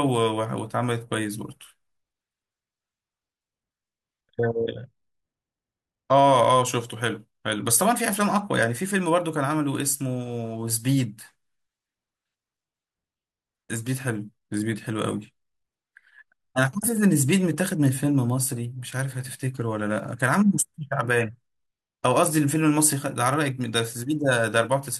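A galloping dit-dit-dit of short 217 Hz buzzes sits well below the speech from 16.6 to 17.6 s: GSM signalling bursts from a nearby 2G phone, rectified by the audio circuit.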